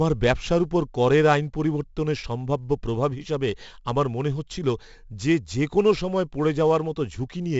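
Speech, and it's carrying heavy 4-bit ADPCM compression throughout: gritty hiss riding every loud syllable, nothing above 7.7 kHz, which fits a 64 kbps stream.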